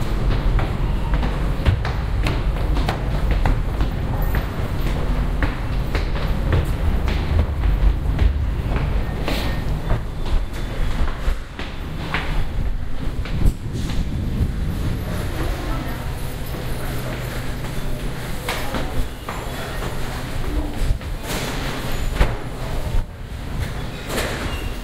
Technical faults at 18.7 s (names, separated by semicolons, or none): block of digital silence